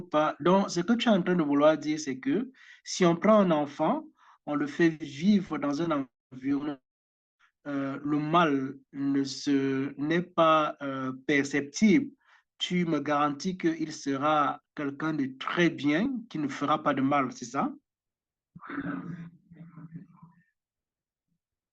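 A speech recording in which the audio briefly lurches forward twice, once at 16.05 s and again from 18.81 to 18.84 s. These are compressed frames skipped: a couple of 10 ms frames were either missing from the stream or rejected by the decoder as corrupt, so roughly 20 ms of sound drops out.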